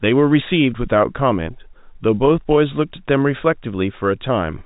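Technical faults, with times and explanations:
No technical faults are present in this speech clip, which comes through the telephone coding path as expected.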